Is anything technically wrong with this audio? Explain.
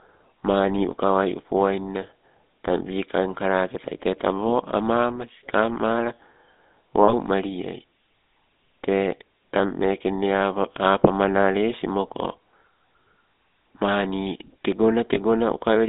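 Yes. Throughout, the speech has a buzzy, gravelly roughness and a narrow 200 Hz to 3.7 kHz band, the mark of the GSM full-rate codec at 13 kbps, which rebuilds the voice from a vocal-tract model excited by sparse regular pulses.

At 7.04 to 7.15 s and 15.14 to 15.18 s, the sound briefly holds as a rough, metallic ring. These are lost GSM frames, where the decoder repeats the last good frame. The gaps fit about 40 ms and 20 ms of lost audio.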